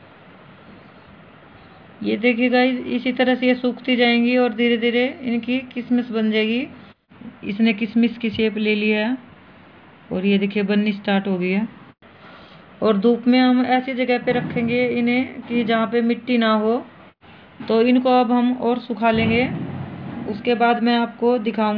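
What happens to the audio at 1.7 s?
Nothing goes wrong at 1.7 s; the audio plays through that moment intact, with no dropout, click or other fault.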